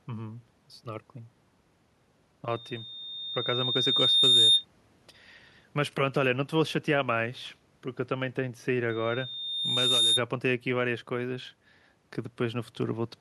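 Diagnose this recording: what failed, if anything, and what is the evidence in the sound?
Loudspeaker feedback squeal at 2.50–4.65 s and 8.89–10.23 s, an analogue acoustic-loop failure: the microphone picks up its own loudspeaker, and loop gain exceeds one at 3.7 kHz. That tone swells over about two seconds, then one, reaching roughly 10 dB, then 5 dB, above the speech.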